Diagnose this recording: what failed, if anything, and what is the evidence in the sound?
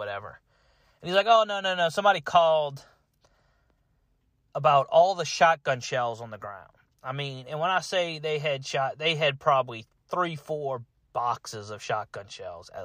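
Nothing in the sound points to a failure at any stage of the chain, from capture to playback, so there is no fault to diagnose in this speech recording.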